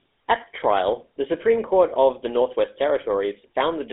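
From start to finish the speech passes through a GSM full-rate codec, with a roughness that fits the original 13 kbps GSM coder. It sits inside a telephone band of about 300 Hz to 3.7 kHz, with nothing above 3.8 kHz. The codec rebuilds each voice from a vocal-tract filter driven by a sparse, regularly spaced excitation, which leaves a plainly audible buzzy, gravelly grain. A simple band-limited line would sound muffled but clean, without that grit.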